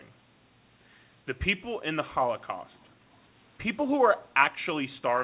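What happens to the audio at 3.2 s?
A brief echo leak runs from 3.14 to 3.27 s: a very faint copy of the speech, about 446 ms late, likely slipping past the far end's echo canceller.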